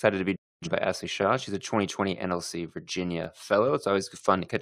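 A digital broadcast dropout runs from 0.36 to 0.67 s, just after "to be": the receiver stopped getting valid frames and muted, fading out in about 8 ms. Roughly 256 ms of sent audio is gone, which fits about six lost frames, then speech resumes.

Overlapping chunks show up at 3.24 to 3.26 s, where one processing block began before the previous one finished. A 20 ms slice plays twice at the join, heard as a brief stutter or click, consistent with chunks about 2 s long.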